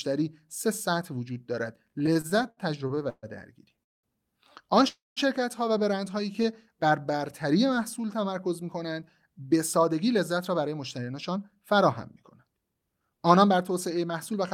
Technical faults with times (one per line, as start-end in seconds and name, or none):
1.99-3.26 repeated stalls (stutter)
3.83-4.06 call audio freeze
4.88-5.19 call audio freeze
6.42-6.47 short stall from a late packet
6.76-7.19 jitter buffer slow-down
9.82-14.39 jitter buffer speed-up